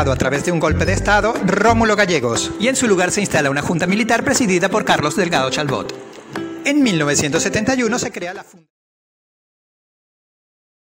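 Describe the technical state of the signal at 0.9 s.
At 0.9 s the signal is intact, with no audible fault at that moment.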